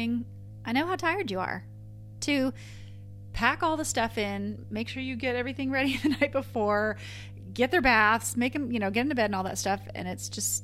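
A steady mains hum at 50 Hz runs under the whole clip. It sits at roughly 15 dB below the speech. A ground loop or a nearby transformer is feeding the power line frequency into the signal path. It sounds like a constant low drone with a few harmonics above it.

From 0.48 to 2.73 s, the speech suddenly runs 5.68% fast. Pitch rises by 95.6 cents, close to a semitone. It settles just before "pack all the stuff". From 4.94 to 5.47 s, just after "the stuff in make", it slows by 5.68% and drops 101 cents. Both are drift correction steps, likely from clock-matching software jumping the playback rate to refill or drain its buffer. Each sounds like an abrupt detune.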